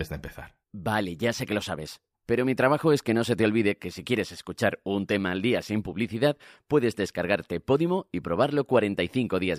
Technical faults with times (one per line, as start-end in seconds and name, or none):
none